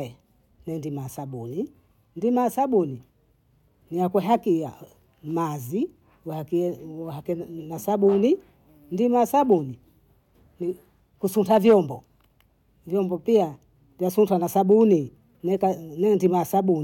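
Hard clipping flattens speech peaks at 9.52 s, from 11.52 to 11.76 s (driven about 4 dB over, harshest), 14.72 to 14.93 s, and 16.26 s, where a stage ran out of headroom. It crackles; the waveform shows squared-off tops, the spectrogram bright vertical streaks of high harmonics.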